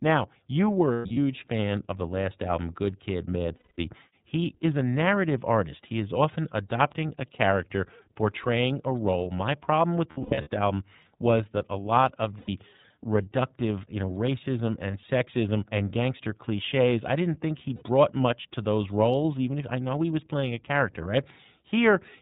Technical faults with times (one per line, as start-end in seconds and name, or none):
0.00-22.21 iLBC codec
0.93-1.18 lost iLBC frames
3.57-3.78 lost iLBC frames
10.10-10.50 lost iLBC frames
12.39-12.49 lost iLBC frames
14.91-14.94 lost iLBC frames
17.76-17.83 lost iLBC frames